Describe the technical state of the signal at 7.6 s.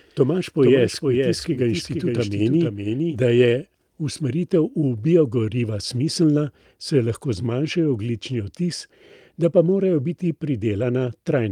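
At 7.63 to 7.65 s a lost packet was rebuilt from error correction: the original data never arrived, so the decoder fell back on the low-bitrate copy carried inside the following packet. The span fits a single lost 20 ms packet. Because that backup copy holds less detail, the replacement audio has no gap but comes through briefly rougher and grainier, with a noisy texture before normal quality resumes.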